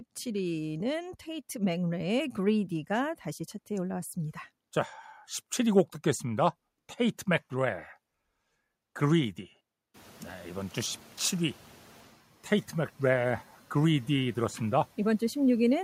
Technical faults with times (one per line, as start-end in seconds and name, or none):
9.94-12.11 noise suppressor catching up